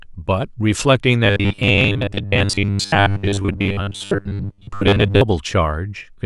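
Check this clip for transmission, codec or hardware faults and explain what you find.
One fault is present: robotic sound from repeated short buffers, running from 1.25 s to 5.21 s. Through that stretch the speech takes on a rigid, metallic buzz fixed at 100 Hz, while the rough shape of the words still comes through. The likely cause is audio arriving too seldom, with the receiver filling gaps by looping a 10 ms slice. Most of the real audio in that span is skipped and replaced by repeats.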